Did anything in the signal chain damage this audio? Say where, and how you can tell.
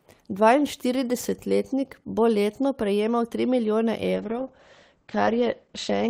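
Yes. A call bitrate drop starts at 4.17 s, just after "letno prejemal tri milijone", and lasts to the end. A falling bandwidth estimate pushed the encoder from 32 to 9 kbps, so the speech turns coarse and muffled as its bandwidth shrinks from 20 kHz to 8 kHz.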